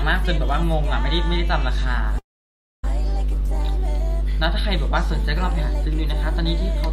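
At 2.18 s a call audio freeze sets in and lasts until 2.84 s. The last sound is briefly carried on, then about 0.6 s of silence follows before the audio resumes where it stopped, now about 650 ms later. The likely cause is delayed packets emptying the jitter buffer.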